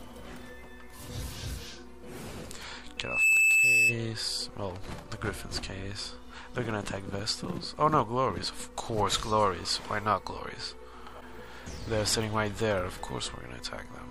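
From 2.97 to 3.99 s, a microphone picking up its own loudspeaker creates loudspeaker feedback squeal: a 2.6 kHz tone swells over a few tenths of a second to well above the sound.

At 11.17 to 11.22 s, damaged data in a compressed stream makes the decoder lose sync, giving a brief blip.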